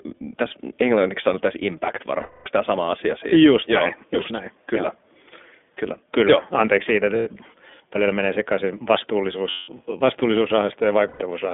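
A speech recording carried over the iLBC codec. The band runs only from about 250 Hz to 3.5 kHz, so it sounds thin and phone-like. Each 20 ms frame is coded on its own, leaving a rough, synthetic edge that fits the 15.2 kbps mode. Lost iLBC frames cause four gaps: 2.20 to 2.48 s (260 ms), 7.16 to 7.27 s (100 ms), 9.50 to 9.71 s (180 ms) and 11.08 to 11.22 s (120 ms). In each, the decoder repeats the last pitch cycle with added noise. The result is a held, buzzy vowel that fades on the longer gaps, with clean recovery straight after.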